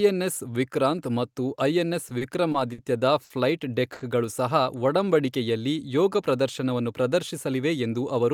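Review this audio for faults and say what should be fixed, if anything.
Repeated stalls (stutter) from 2.09 to 2.79 s. Packets arrived late four times, and the receiver stretched the last sound to cover 100 ms in total. The longest hold is 40 ms.

Short stalls from late packets at 3.24 to 3.31 s and 3.93 to 4.02 s. Each time a packet missed its slot, and the sound was held for 60 ms and then 80 ms before the speech resumed.

Jitter buffer slow-down from 4.79 to 5.27 s. The receiver repeated pitch periods to rebuild its reserve, adding 53 ms. The speech runs at 90% speed with unchanged pitch.

Jitter buffer speed-up from 7.33 to 8.31 s. Excess buffered audio was trimmed by dropping short pitch-period pieces, about 70 ms in total. The speech runs at 108% speed and sounds hurried.

To prevent these, stabilise the network path to reduce packet delay variation, and give the jitter buffer a steadier target delay so it adapts less abruptly.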